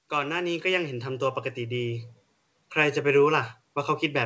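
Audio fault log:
0.09–2.12 s: automatic gain rising. The gain control judged the input too quiet and raised its gain about 8 dB, so speech and background swell together.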